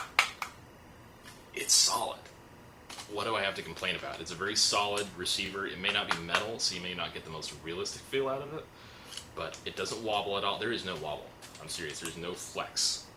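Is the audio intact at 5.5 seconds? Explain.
No. From 5.46 to 5.49 s a brief stutter clicks through, from overlapping chunks: a 23 ms slice plays twice where one 3-second chunk begins before the previous ends. Throughout, including this moment, a faint chirping warble sits roughly 25 dB below the sound. This is timecode bleed, 24-frame code leaking in and flipping between tones near 1 and 2 kHz.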